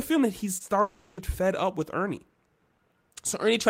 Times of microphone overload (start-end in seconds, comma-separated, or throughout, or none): none